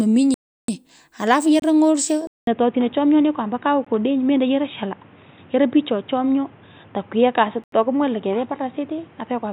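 A block of digital silence opens the faults at 0.34 to 0.68 s: for 341 ms the sound drops straight out and returns with no fade, and the gap is heard as a clear hole. Its length fits a 16384-sample buffer that was not filled in time. A second block of digital silence at 1.60 to 1.62 s lasts only 25 ms.

At 2.27 s the speech goes silent for about 200 ms and returns duller and narrower, staying that way to the end. Nothing remains above 3.8 kHz, and a new background noise sits well below the speech, while the loudness stays about the same. This sudden change in band and noise points to an input switched to a poorer device, likely a different microphone or a headset's call profile.

Within the narrowed sound, two more blocks of digital silence follow. At 3.85 s comes an 18 ms dropout. At 7.64 to 7.72 s an 85 ms cut leaves a short hole, and its length fits a 4096-sample buffer.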